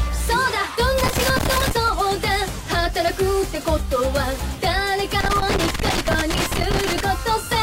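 Loose connector crackle appears twice, first from 0.98 to 1.71 s and again, for longer, from 5.20 to 7.00 s. A worn or dirty contact somewhere in the cable path is making and breaking as it shifts, so the signal is chopped on and off in rapid, irregular bursts, and any DC on the line turns each break into a small pop. The result is a ragged scratching crackle laid over the sound in both stretches.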